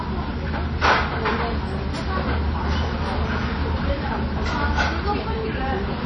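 WMA compression, likely, throughout: a low-bitrate transform codec, around 32 kbps, smears quantisation noise into ringing, washy hiss and removes everything above 9.8 kHz.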